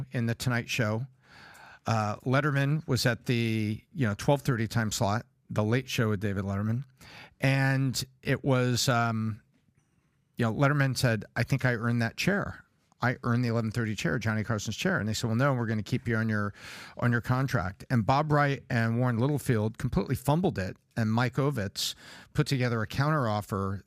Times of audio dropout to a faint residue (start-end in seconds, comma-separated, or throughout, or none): none